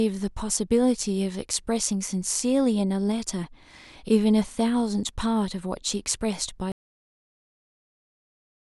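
At 6.72 s the speech stops dead with a cut-off end: the final stretch of audio was never written out or played, so a sound is severed mid-way and nothing follows but digital silence for the remaining 2 s or so. There is no natural decay or room tail. On a waveform the signal ends abruptly in a vertical edge followed by a flat line, and a spectrogram shows energy ending in a hard vertical boundary, then blank.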